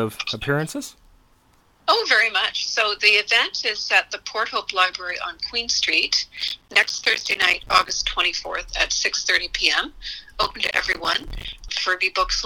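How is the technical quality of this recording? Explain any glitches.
Two bursts of processor overload crackle mar the recording, from 6.37 to 7.91 s and again from 10.43 to 11.53 s. The processor repeatedly failed to finish its short audio buffers, each around 5 ms, in time. Every missed buffer became a hard-edged sliver of silence. Dozens of these tiny gaps in quick succession produce a gritty, tearing crackle over the sound, which stops once the load eases.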